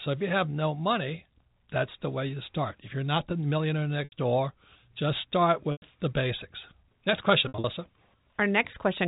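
At 4.04 s, just after "you're not the millionaire", 80 ms drops out. The receiver bridges it by repeating the last pitch period, so the sound holds briefly with a faint buzz before "door just start". This is packet loss with pitch repetition. A 100 ms gap follows at 5.72 s, before "the basics". From 7.48 to 7.64 s, losses are scattered, the longest run 60 ms. The gaps fit 20 ms packets, carried over G.711 telephone coding.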